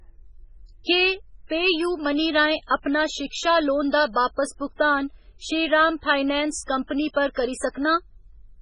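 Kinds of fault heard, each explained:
MP3 compression: Throughout the speech there is heavy codec damage, and the likely cause is MP3 encoding at a very low bitrate, which fits roughly 16 kbps. Short of bits, the encoder removes everything above 10.3 kHz, so the top end stops abruptly. It also drops weak spectral lines that switch on and off between frames, which gives the sound a watery, swirling texture and a metallic edge on s sounds.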